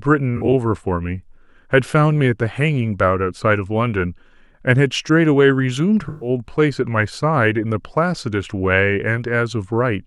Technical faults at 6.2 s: AAC frame loss with concealment

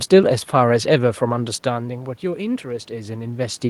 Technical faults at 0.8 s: none

